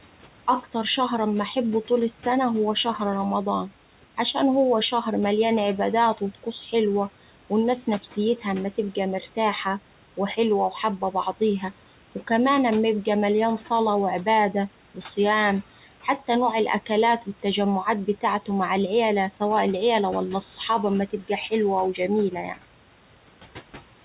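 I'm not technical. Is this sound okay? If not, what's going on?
No. A noise suppressor keeps turning down what it takes for steady background noise, so the leftover noise sinks and swells with the speech throughout.

At 21.1 to 21.3 s, right after "العيلة ولا الصحاب أما", the same suppressor mistook a bit of speech for noise. It was briefly swallowed, an example of speech cut by the noise suppressor.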